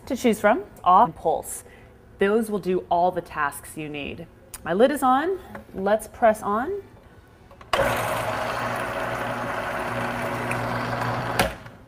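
A skip ahead occurs at 1.05–1.16 s: roughly 0.7 s of audio is missing, discarded in transit or by an overflowing jitter buffer, so playback lurches forward. The waveform shows an abrupt splice with no silent gap, and the spectrogram shows mismatched content butting together.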